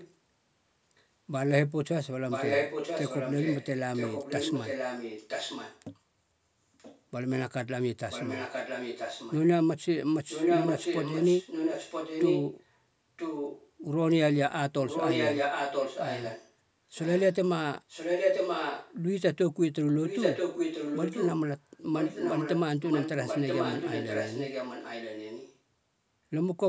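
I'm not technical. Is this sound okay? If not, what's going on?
No. This clip has an echo leak. A copy of the speech returns about 0.98 s late. It is faint at 0 to 1.03 s and 6.78 to 7.01 s, and clearer at 2.3 to 5.82 s, 8.1 to 9.36 s and 20.03 to 25.58 s. At 10.28 to 13.7 s and 14.87 to 18.94 s it is as loud as the speech. The likely cause is a loudspeaker on the other end whose echo canceller let its own sound back in.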